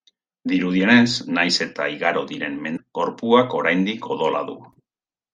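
A short speech recording with one fault: damaged data in a compressed stream, at about 2.73 to 2.80 s. The glitch lasts roughly 70 ms. Some bytes in the compressed data there were lost or corrupted. The decoder could not read those frames correctly. It lost sync and had to hunt for the next valid frame header. The result is a brief chirp, squawk, click or short hole in place of clean sound.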